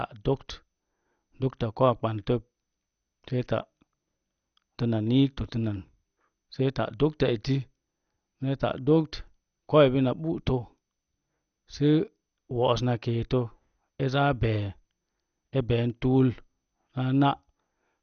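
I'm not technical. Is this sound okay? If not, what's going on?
No. The speech sounds dull and plainly gurgly all the way through, with nothing above about 6.5 kHz. That points to heavy MP2 compression as the likely cause: unlike simple muffling, the remaining sound has a grainy, bubbling roughness, like weak digital radio.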